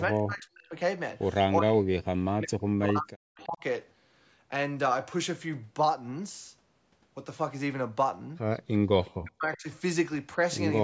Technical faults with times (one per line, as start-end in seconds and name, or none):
0.09-0.76 speech suppressed in double talk
1.61-3.63 speech suppressed in double talk
9.05-9.11 echo leak
9.15-9.68 speech suppressed in double talk